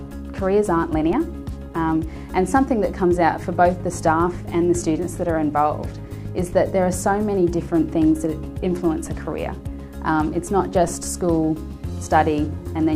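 Two DC steps land at 1.13 s and 10.88 s: the zero line jumps by about -21 dBFS, giving a low thump as it drains away through a roughly 20 Hz high-pass.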